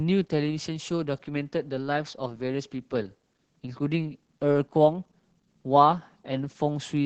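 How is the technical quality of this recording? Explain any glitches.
The quality is limited by heavy low-bitrate Opus voice compression throughout: the speech sounds muffled, hoarse and faintly robotic, consistent with roughly 10 kbps SILK coding, with a spectrogram showing energy cut sharply above 8 kHz.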